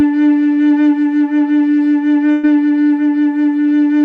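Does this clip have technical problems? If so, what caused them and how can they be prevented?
Yes. Burst of packet loss from 2.31 to 2.45 s: about 120 ms of music went missing, and the receiver stretched and faded the last sound across the gap. A larger jitter buffer, forward error correction or a steadier network connection would prevent it.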